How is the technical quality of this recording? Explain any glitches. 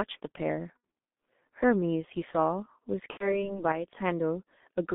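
The quality is poor. The speech sounds muffled and hoarse throughout, and has two brief dropouts.

G.723.1 codec: the whole clip is narrow and rough, with smeared consonants. It is confined to roughly 200 Hz to 3.6 kHz. That heavy coding damage comes from the codec's 30 ms frames and its slowly updated voice model. The sound fits its 6.3 kbit/s mode.

VoIP packet loss concealed by the speech codec: at 0.77–0.83 s and 3.11–3.50 s the speech turns into a fading buzzy, tonal smear. The decoder filled about 60 ms and 90 ms of missing frames by repeating its last pitch and filter at falling gain. The later gap stays weakened longer as the codec recovers.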